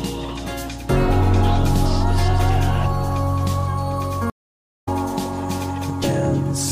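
At 4.30 s a stream reconnect occurs: the connection drops and the audio goes silent for 0.52 s, then a fresh decoder picks up mid-stream at 4.89 s. Playback resumes about half a second further on, so that stretch of material is skipped.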